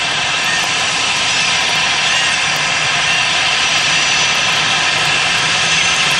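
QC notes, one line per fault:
No faults were found in this clip.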